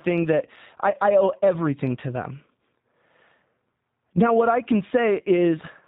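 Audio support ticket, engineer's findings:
G.729 codec, whole clip: speech band-limited, nothing above 4 kHz, rough and faintly synthetic texture, plainly audible. Consistent with G.729A at 8 kbit/s: voice rebuilt from a vocal-tract filter, pitch predictor and sparse pulse excitation per 10 ms frame, so fine detail is lost.

VoIP packet loss concealed by the speech codec, 0.90–0.94 s, after "thing that", before "I owe everything to": about 30 ms dropout, fits one lost packet. Decoder repeats last pitch and filter at falling gain, producing a brief fading smear; recovery lags while predictor state rebuilds.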